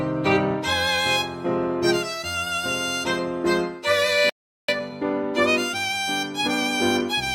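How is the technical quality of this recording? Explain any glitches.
The music is marred by two linked glitches, a dropout followed by a hurried stretch.

At 4.30 s a playback stall cuts the music to silence for about 390 ms, until 4.69 s, likely because the player ran short of data or its thread was blocked.

From 4.69 s to 7.33 s comes time-compressed catch-up: the music runs about 1.1 times fast at unchanged pitch, as small cross-faded pieces are cut to clear the backlog.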